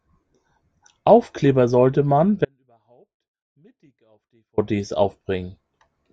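At 2.45 s the speech cuts off abruptly mid-flow and stays gone until 4.58 s, a gap of about 2.13 s. Across that stretch only a faint trace of the sound remains, roughly 40 dB below its normal level, before the speech returns just as suddenly. This is an audio dropout to a faint residue. The likely cause is a brief loss of the wanted signal upstream while the path after the break stayed live, letting only a small leak through.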